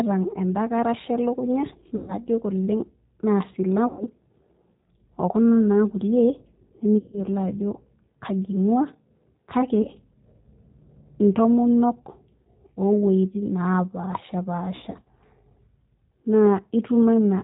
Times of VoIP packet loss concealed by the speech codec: 1.96-2.14, 3.87-4.04, 6.98-7.21, 9.82-9.87, 14.76-15.09

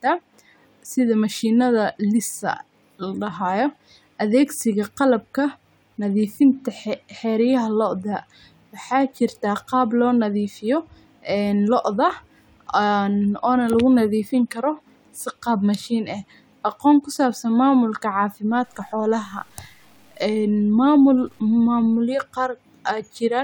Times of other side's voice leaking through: none

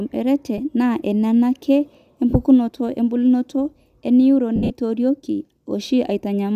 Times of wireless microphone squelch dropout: none

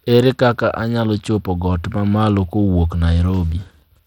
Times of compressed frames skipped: none

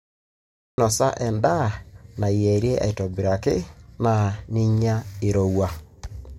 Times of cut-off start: 0.00-0.78

